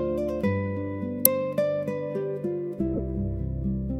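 At 1.25 s, compressed frames are skipped. A short stretch of the encoded stream never reaches the output, so the audio jumps ahead by only a few milliseconds, and the signal lurches forward at the join.

From 2.94 to 3.00 s, a corrupt frame is decoded. Roughly five frames carry flipped bits, and the decoder plays them as though they were valid, placing energy at frequencies and levels that have nothing to do with the surrounding audio. The result is a brief burst that peaks around -15 dBFS. Unlike the skip, nothing is lost from the timeline. Sound that does not belong takes the place of the real audio in those frames, and it stops once valid frames resume.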